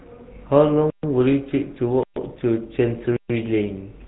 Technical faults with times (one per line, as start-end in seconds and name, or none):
0.00-4.08 GSM full-rate codec
0.90-1.03 gap between chunks
2.03-2.16 gap between chunks
3.16-3.30 gap between chunks